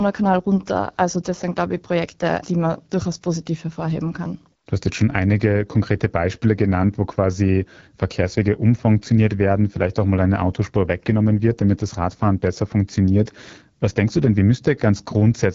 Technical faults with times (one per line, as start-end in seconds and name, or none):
0.00-15.55 AMR wideband (HD Voice) codec